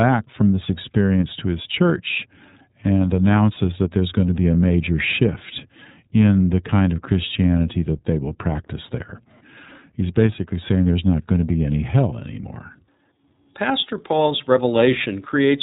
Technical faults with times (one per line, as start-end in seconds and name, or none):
0.00-15.62 iLBC codec